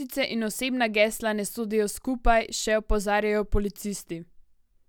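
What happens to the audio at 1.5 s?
Nothing goes wrong at 1.5 s: the speech carries straight through that moment with no dropout, click, glitch or other technical fault.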